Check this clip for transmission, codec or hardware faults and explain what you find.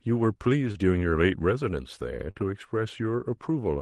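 Two brief dropouts were found, both short concealed packet loss, at 0.71 to 0.78 s and 2.31 to 2.38 s. About 40 ms of audio arrived too late each time, so the receiver extended the preceding speech for roughly 35 ms before crossfading back, leaving a short smear or wobble. The call-codec coloration and a band limit near 12 kHz fit a low-bitrate Opus path.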